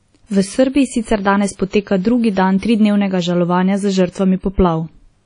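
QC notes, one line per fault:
Throughout, WMA compression: a transform codec, likely at a low bitrate around 32 kbps, zeroes weak detail and cuts everything above 10.1 kHz, leaving washy, ringing speech with breathing hiss.
1.69 to 1.73 s, pre-echo: after "sicer danes", block-spread quantisation noise fills 46 ms before a sharp attack, so a short hiss precedes it and the onset smears.
2.59 to 2.63 s, pre-echo: just before "tridnevnega žalovanja za", noise spread across 33 ms leaks ahead of the attack, giving a brief hiss and a softened start.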